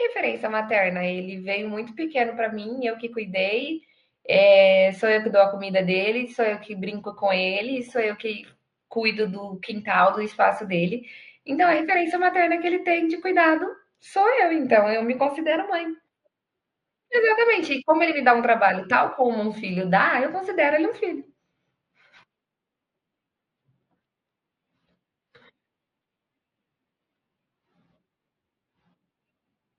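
No technical faults can be heard anywhere in this speech recording.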